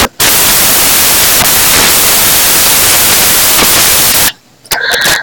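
From the very start to the end, the speech is buried under loud white noise, the mark of samples built from the wrong bytes. The reader assembled each sample badly, misaligned by a byte or with the byte order flipped, so the jittery low bits landed in the high part of every value. What comes out is a harsh hiss.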